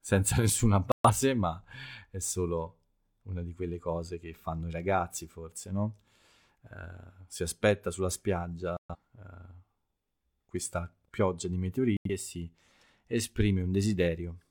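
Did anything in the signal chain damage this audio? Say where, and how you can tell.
Yes. The speech drops abruptly to silence three times: 0.92–1.10 s, before "ma è solo una"; 8.77–8.95 s; and 11.97–12.09 s, between "questa pioggia di" and "e si". This is digital broadcast dropout: the receiver muted failed frames, losing 128, 128 and 85 ms, which fits two or three frames each.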